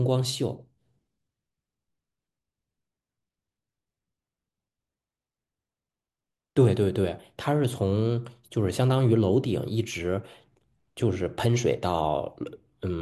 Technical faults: none

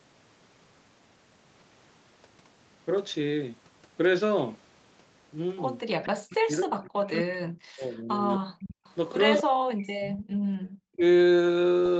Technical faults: speech suppressed in double talk; echo leak; background gated by the echo canceller

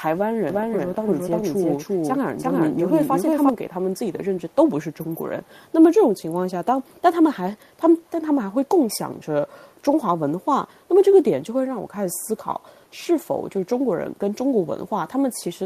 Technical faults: doubled audio track; echo leak

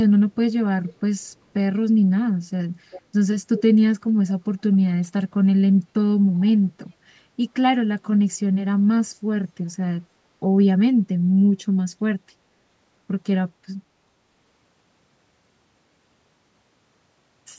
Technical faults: echo leak

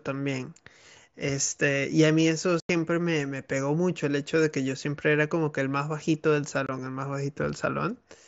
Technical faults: block of digital silence

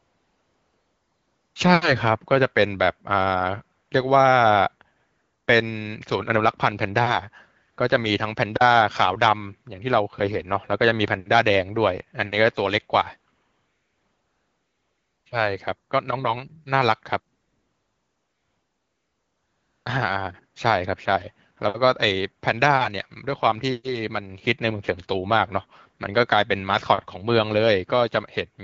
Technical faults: AMR comfort noise

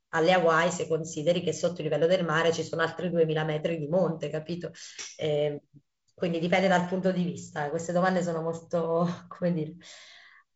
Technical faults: none

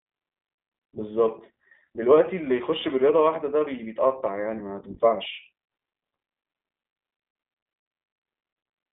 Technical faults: iLBC codec

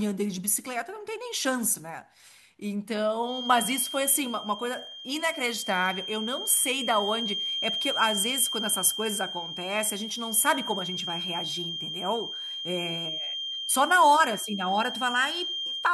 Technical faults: feedback whistle

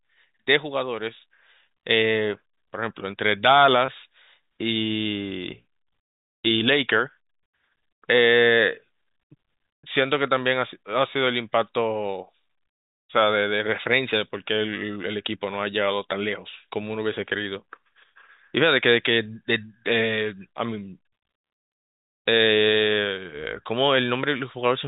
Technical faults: packet loss with pitch repetition

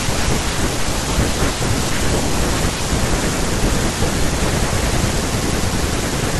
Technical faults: compressed frames skipped

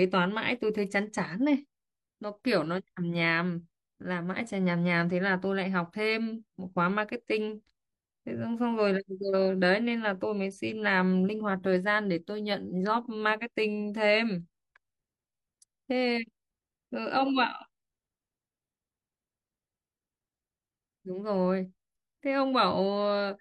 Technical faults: none

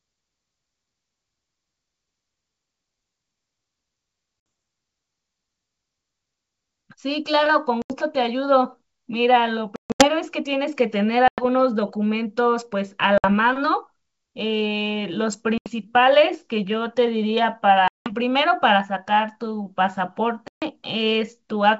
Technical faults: packet loss on an ADPCM call

